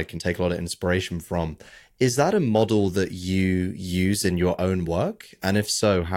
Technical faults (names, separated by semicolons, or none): resampler restarted on every block